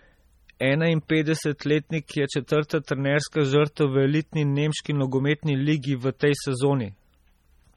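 Throughout, the speech carries heavy artefacts, likely from MP3 compression at a low bitrate around 32 kbps. Weak frequency lines drop in and out between frames, giving a watery, swirly texture. On a spectrogram, the energy breaks into flickering patches, with nothing above a hard ceiling at 19.4 kHz.

At 0.60 s, pre-echo precedes a sharp onset. Quantisation noise sized for the loud attack spills about 11 ms into the quiet before it, so a brief hiss comes first and the attack softens. A waveform shows fuzz just ahead of the transient.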